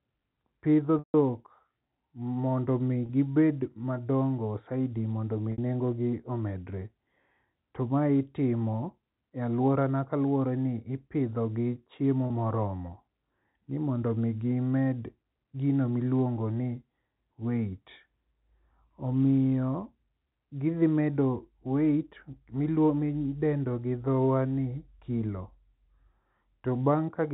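A short, slightly held buzz bridges gaps at 0.99 s (150 ms, fading toward silence), 3.06 s after "mondo omi" (30 ms), 5.52 s between "madongo saidi mondo" and "nengogi omedre" (60 ms), and 12.27 s (30 ms). This is packet loss with pitch repetition: the receiver loops the last pitch period across each missing stretch.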